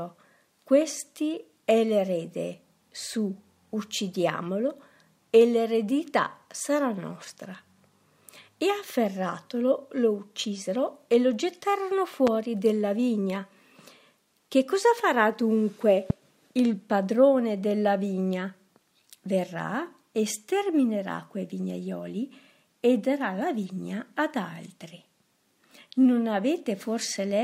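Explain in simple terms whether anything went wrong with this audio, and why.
Twice, something electrical likely jolted the signal, perhaps a plug, a switch or a burst of static, pushing a sudden spike of voltage into it. Each jolt is heard as a loud pop: a sharp, brief crack sitting well above the level of everything else, once from 12.27 to 12.30 s and again from 16.10 to 16.13 s. Each pop is a single hit, and the sound keeps going underneath it.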